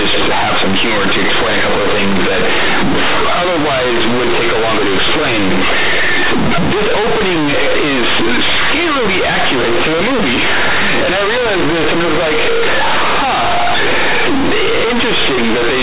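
From start to finish, the speech carries one fault: companded audio read as linear. The bytes were coded as mu-law but are played as plain 8-bit samples, with no expansion step. Small values near zero now jump across half the output range whenever the sign flips. Quiet passages come out as loud as peaks. The result is harsh, buzzy, very loud distortion, with heavy noise filling the pauses. Beneath it the telephone band still shows, with nothing above 4 kHz, which fits 8 kHz G.711 coding.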